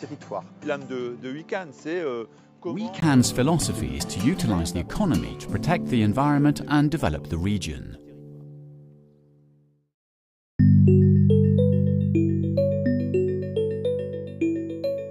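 From 0.0 to 3.02 s the sound is dull and boxy, with nothing above 7.6 kHz, a quieter level and a faint added noise floor, likely an input switched to a poorer device. A 20 ms silence at 3.02 s marks the switch back to fuller-band audio.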